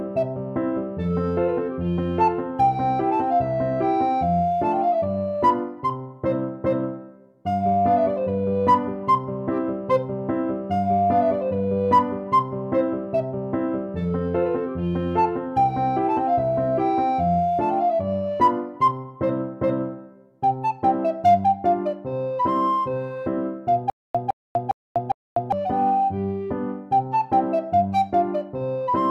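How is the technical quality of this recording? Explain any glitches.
One glitch mars the recording. Stutter with silent gaps appears from 23.90 to 25.52 s: a 160 ms burst repeats four times, each followed by about 246 ms of dead silence, every 406 ms. The likely cause is a stalled stream replaying its last buffered fragment at each retry, so the audio meant for that stretch is lost.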